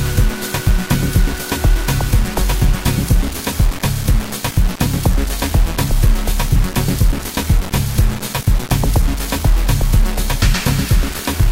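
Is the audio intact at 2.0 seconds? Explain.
No. At 2.0 seconds, as across the whole clip, low bit depth without dither is present. The grainy distortion that shifts with the sound, with quiet passages sputtering or dropping out, points to likely rounding to about 4 bits, leaving error only about 15 dB below the signal.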